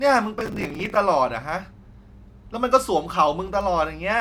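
A speech recording with processor overload crackle from 0.40 to 0.96 s: dozens of missed buffer deadlines, each refilled with a scrap of old audio, giving gritty tearing. The waveform shows hard-edged discontinuities at intervals fitting roughly 5 ms buffers; the spectrogram shows broadband vertical streaks.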